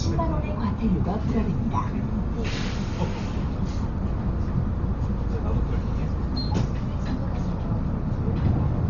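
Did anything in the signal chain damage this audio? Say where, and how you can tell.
Yes, at the codec stage. Throughout the recording, nothing is present above 6.9 kHz. The sound is dull, with a rough, fluttering noise around tonal parts. This is likely Dolby Digital compression at a starved rate, fitting about 32 kbps, where unfunded frequency lines get replaced with noise.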